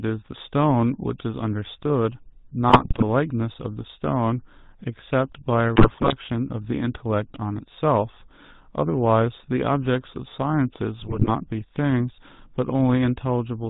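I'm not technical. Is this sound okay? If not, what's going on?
No. The GSM full-rate codec runs through the whole recording. This is the original digital mobile phone system, and it squeezes speech into a rough model of the throat and mouth driven by a stripped-down stream of pulses. Everything above 4 kHz is cut off, so the voice sounds muffled and takes on a buzzy, gravelly roughness from start to finish. Here that damage is plainly audible.

GSM bit errors strike three times: from 2.70 to 3.03 s, from 5.76 to 6.13 s, and from 11.00 to 11.31 s. Each burst lasts about a third of a second. A weak phone signal garbled some of the data, so the decoder rebuilt those moments from wrong settings for tone, pitch and loudness. The speech briefly breaks into squawks, pops and gargling.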